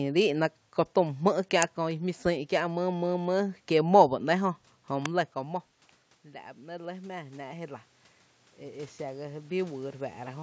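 At 1.62 s and again at 5.05 s there is an electrical switching spike, most likely a nearby switch, motor or static discharge arcing briefly and coupling into the audio line. Each is a sharp snap laid over the speech rather than part of it. The second falls close to where the talker shifts position at the microphone, around 5 s, but the click itself is far too abrupt to come from that movement.

From 6.23 s to 7.9 s the automatic gain rises: the input has dropped by about 15 dB, and the gain control responds by lifting its gain by about 4 dB over well over a second. The speech and the room noise behind it swell up together. The same happens from 8.59 s to 10.38 s, this time with a rise of about 5 dB against the same drop of about 15 dB. The voice and background again creep louder in step over almost two seconds.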